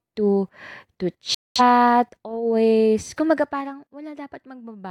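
A digital broadcast dropout cuts the speech to silence from 1.34 to 1.61 s. The receiver stopped getting usable frames, either because the signal was lost or because frames failed their checksum, so it muted its output until valid data returned. The hole is a little over a quarter of a second, which fits roughly five lost frames. Whatever was sent during that gap is gone, and the speech simply resumes partway along.

Zipper noise appears from 3.02 to 3.95 s as the level comes down by roughly 15 dB. The gain is lowered in coarse 2 dB increments, about ten per second, with no smoothing between them. Each jump puts a small discontinuity into the waveform that is heard as a click. Strung together, the clicks form a rapid ticking that rides on top of the speech for as long as the fade lasts.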